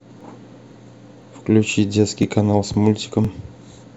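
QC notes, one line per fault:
0.21 to 3.25 s, overlapping chunks: short clicks or stutters at 0.21, 0.71, 1.22, 1.73, 2.23, 2.74 and 3.25 s, one every half second. The speech was handled in 0.5 s blocks, and each block begins slightly before the previous one finished, so about 6.5 ms of audio plays twice at every join. That tiny repeat breaks the waveform's continuity, and the evenly spaced seams produce a regular ticking stutter across the speech.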